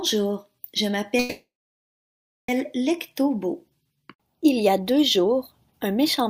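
At 1.19 s the audio stops advancing and the last sound is drawn out as a short, fading buzz or hiss, then drops to silence for about 1.01 s. At 2.51 s it resumes exactly where it left off, with nothing skipped, so everything after sits roughly 1.29 s later than before. This is a call audio freeze, likely from packets held up in transit until the jitter buffer ran dry.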